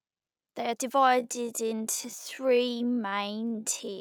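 From 1.01 s to the end, the speech abruptly slows to about half pace with pitch unchanged, so it drags: likely a time-stretched section, stretched to 0.556× speed.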